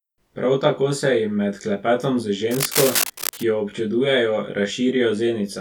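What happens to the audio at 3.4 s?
At 3.4 s the speech is in the last moments of cable scratch noise, which runs from 2.47 to 3.43 s, starting just after "med klepetom z". Dense, uneven rustling bursts sit roughly 5 dB below the speech, likely from a worn cable or connector being moved and its contact resistance fluctuating.

Channel delay (comb filtering) also applies at this point. One channel lags the other by around 20 ms, and summing them to mono cancels common content at evenly spaced frequencies from around 30 Hz upward. This makes the speech sound rough and slightly doubled.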